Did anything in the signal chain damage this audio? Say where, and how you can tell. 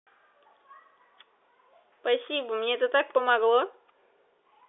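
No, nothing in the chain damaged this speech.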